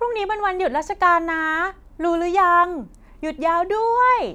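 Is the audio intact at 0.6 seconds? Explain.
Yes, the speech is intact at 0.6 seconds, with no audible fault at that moment.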